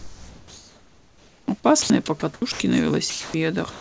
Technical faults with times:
0.00-1.48 comfort noise in place of the background
1.82-1.90 sound dropped by the voice detector
2.20-2.60 sound dropped by the voice detector
3.10-3.34 sound dropped by the voice detector
3.70-3.81 sound dropped by the voice detector

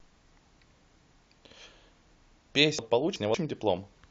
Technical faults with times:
2.79-3.34 chunks out of order

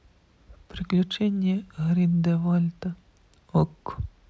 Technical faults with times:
none

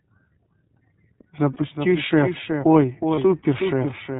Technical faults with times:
0.00-4.19 doubled audio track
0.00-4.19 iLBC codec
1.53-1.57 lost iLBC frames
3.14-3.18 lost iLBC frames

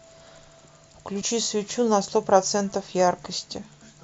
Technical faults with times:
1.21 compressed frames skipped

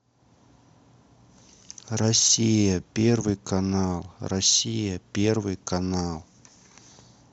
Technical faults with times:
1.98 overlap between stream segments

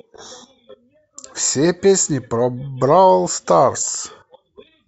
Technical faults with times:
none

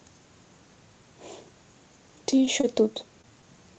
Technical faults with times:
2.61-2.65 short stall from a late packet
3.21-3.26 short stall from a late packet

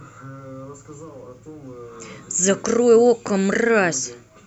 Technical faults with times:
none

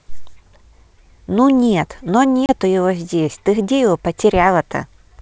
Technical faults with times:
2.46-2.52 packet loss on an ADPCM call

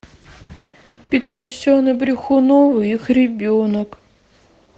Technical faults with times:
0.43-1.12 repeated packet loss (robotic sound)
1.21-1.54 long network dropout

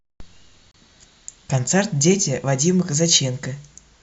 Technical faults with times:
0.71-0.74 gap between stream segments

